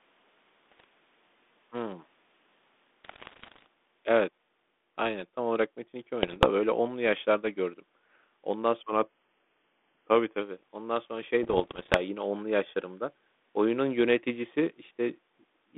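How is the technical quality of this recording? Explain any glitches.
The speech runs through a narrow telephone band of about 200 Hz to 3.6 kHz, consistent with 32 kbit/s G.726 ADPCM, and is hit by bit errors on an ADPCM link at 0.71 to 0.84 s, 3.04 to 3.67 s, 6.23 to 6.47 s, and 11.43 to 11.98 s just after "ondan sonra". Roughly one to three percent of bits flip, worst in the 3 s burst. Each flipped bit corrupts the decoder's step size and predictor, so the error rings on for milliseconds, producing pops, rough crackly bursts and brief jumps in level.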